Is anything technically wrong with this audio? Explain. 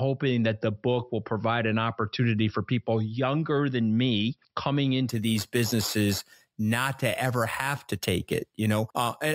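Yes. From 5.09 s to the end, the speech carries imaging from sample-and-hold upsampling, consistent with a 12 kHz source raised to 48 kHz by repeating samples without smoothing. Mirrored copies fill 6–12 kHz at about 14 dB below the signal, adding a bright metallic fizz that tracks the voice.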